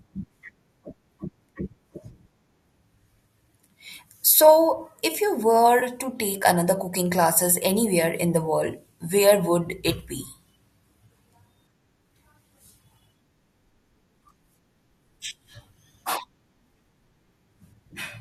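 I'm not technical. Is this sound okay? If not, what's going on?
No. At 5.80 to 5.83 s there is a tiny smeared, noisy blip, about 20 ms long. This is AAC frame loss with concealment. A scrap of audio went missing, likely about two frames, and the decoder patched the gap by guessing from the sound just before.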